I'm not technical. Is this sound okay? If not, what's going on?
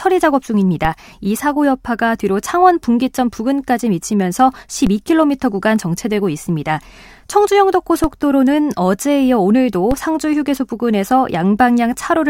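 No. There are four DC steps, at 0.85, 4.87, 8.04 and 9.91 seconds. At each one the waveform's resting level suddenly jumps off centre and then drifts back, heard as a low thump under the speech, which carries on unaffected.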